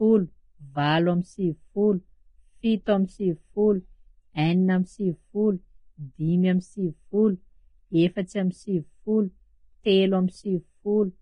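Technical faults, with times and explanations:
Throughout, Vorbis compression: the audio sounds hissy and grainy, its tones roughened and onsets smeared, with nothing above 10.6 kHz. A spectrogram shows a hard ceiling and blotchy noise in the upper bands, likely from heavy Vorbis coding at a low bitrate around 24 kbps.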